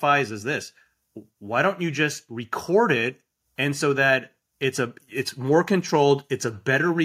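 No technical faults can be heard anywhere in this speech recording. Nothing in it breaks up, drops out or changes abruptly at any point.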